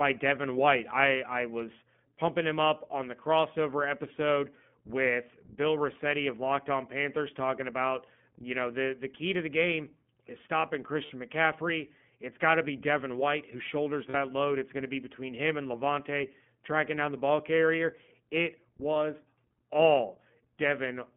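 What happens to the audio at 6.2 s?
At 6.2 s the speech carries iLBC codec damage, present throughout the clip rather than starting there. The codec encodes the excitation of each 20 ms frame independently of the previous one, so the sound is plainly rough and slightly synthetic. The band runs only from about 150 Hz to 3.4 kHz, which removes sibilant brightness and low body. The coding quality points to the 15.2 kbps mode.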